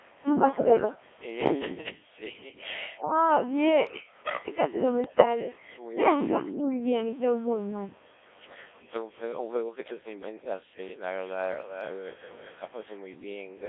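Throughout the speech runs through the Codec 2 vocoder with heavy damage. The sound fits a rate of about 1.3 kbit/s. Only pitch, voicing, level and a rough spectral shape survive, and the decoder rebuilds everything from sine waves. The voice comes out robotic and buzzy, with no original waveform underneath. The band sits between 250 Hz and 3.5 kHz, so it sounds thin and boxed in.

From 0.68 to 0.95 s, bit errors on digital voice radio break in. Around a tenth of the bits are flipped. Each wrong bit sets the pitch, level or tone colour of a whole frame, so the voice jumps and warbles into bleeps. It happens again from 5.04 to 5.25 s, where the error rate is higher, near 15 percent.

Between 2.99 and 4.03 s the speech dips in pieces. The deepest drop is about 15 dB, and roughly half a second is affected in total. The likely cause is speech suppressed in double talk. Both ends talking at once would leave the echo canceller unable to tell its own talker from returning echo, so it turned the voice down.

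At 10.90 to 11.01 s the background is gated by the echo canceller. The room sound drops by about 14 dB for a tenth of a second. The canceller clamped the microphone while the loudspeaker played, then let go. A second, deeper gate follows from 13.16 to 13.56 s, at about 28 dB for around 0.4 s. There the background nearly vanishes before returning.

From 11.21 to 12.55 s a faint delayed copy of the speech trails the original by 389 ms. It sits about 20 dB below the voice. This is likely echo leak: a loudspeaker at one end fed its microphone, and the echo canceller let part of it back down the line.

The call microphone processing is audible as a trimmed low end.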